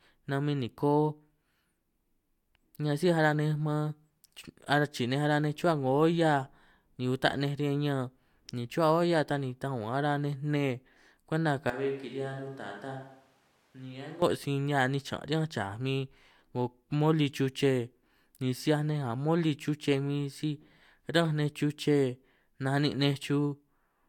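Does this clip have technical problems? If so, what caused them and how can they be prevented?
Yes. From 11.70 to 14.22 s the speech abruptly turns roomy and hollow, loses its low end, drops by roughly 10 dB, and sits over audible background noise about 30 dB below it, before snapping back just as suddenly. This is likely a switch to a distant microphone: the close mic's signal dropped out, leaving a far-off pickup such as a camera mic that captures more room reflection and less direct sound. To prevent it, secure and monitor the close mic's connection, and record a backup track from a second close mic.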